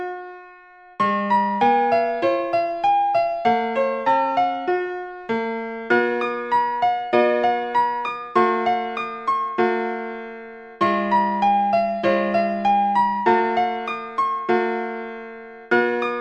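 From the first moment to the last, the audio runs about 1.38 times too fast and sits roughly 5.55 semitones sharp. This is a wrong sample rate: the samples are clocked out faster than they were captured, with no conversion. The ratio fits 32 kHz material played at 44.1 kHz. Unlike a pitch shift or time-stretch, which alter one property alone, here speed and pitch rise together in exactly the same proportion, giving a hurried, chipmunk-like brightness.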